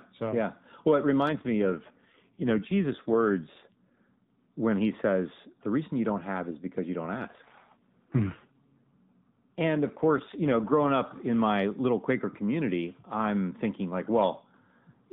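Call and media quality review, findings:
AMR rate drop, 1.28–4.54 s and 7.18–10.92 s: speech turns rougher and buzzier, then recovers. Sound fits a codec step down from 12.2 to about 5.9 kbps. Spectrogram: same 4 kHz ceiling, no gaps, harmonics smeared. Waveform: envelope continuous.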